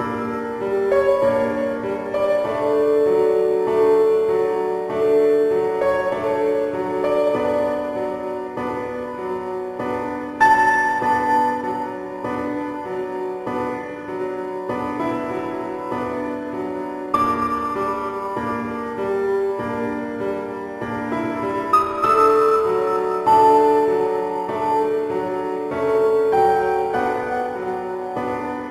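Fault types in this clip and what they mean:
No technical faults can be heard anywhere in this clip. There is nothing in the audio that calls for a fault description.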